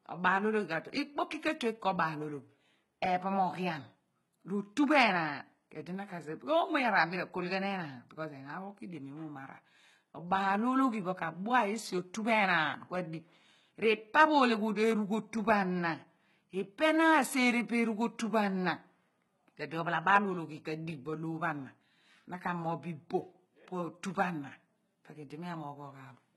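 From start to finish the speech carries heavy HE-AAC compression damage, likely from a very low-bitrate encode, with the sound pointing to something around 16 kbps. The treble is present but synthetic: it is rebuilt by copying lower bands upward, so s sounds come out gritty, metallic and lispy, and nothing survives above about 11.8 kHz. Unlike a plain low-pass or dull MP3, the top end stays bright yet sounds wrong.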